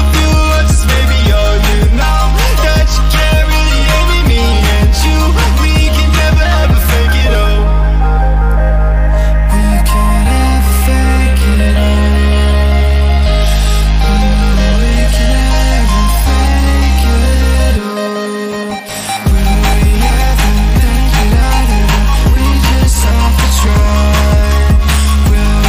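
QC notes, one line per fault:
4.59 to 11.42 s, crude rate conversion: a gritty, inharmonic fizz rides on louder and brighter passages, sitting around 30 dB below the sound. Samples were dropped or repeated with no filtering, consistent with a 48 kHz to 44.1 kHz change, creating unrelated tones.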